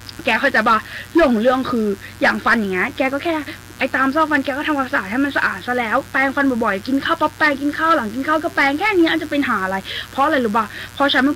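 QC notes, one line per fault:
throughout, mains buzz: a steady, raspy buzz runs under the sound for the whole clip, roughly 25 dB below it. Sharp switching spikes leak in twice per 60 Hz cycle, and their 60 Hz harmonics climb into several kHz, giving the rasp.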